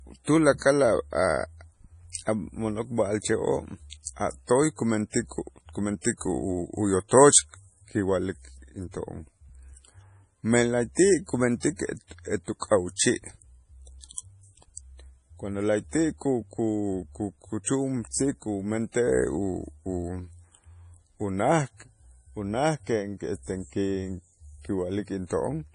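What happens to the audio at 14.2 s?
Pre-echo runs from 14.14 to 14.18 s. The codec spread its quantisation noise across the whole transform block, so the noise meant for a sharp attack also fills the quiet 36 ms before it. A brief hiss leads in, and the attack itself sounds soft and smeared.

This moment sits inside MP3 compression that affects the whole speech clip and is likely the cause of the pre-echo. Nothing is heard above about 10.5 kHz, and weak frequency components flicker on and off, giving a watery, swirly texture and chirpy sibilants. That heavy damage fits a bitrate around 32 kbps.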